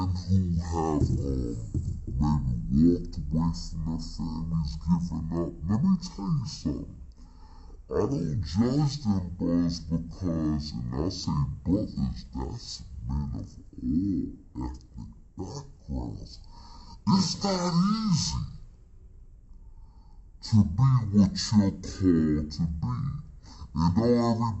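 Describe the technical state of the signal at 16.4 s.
At 16.4 s the signal is affected by stereo read as mono, a fault that runs through the whole clip. The playback chain is treating interleaved left and right samples as consecutive samples of one channel, so every stereo frame is stretched into two mono samples. That doubles the duration, and the sound plays at 0.5x speed, pitched 12 semitones (a full octave) low, with a fainter mirrored copy of the content folded into the upper half of the spectrum.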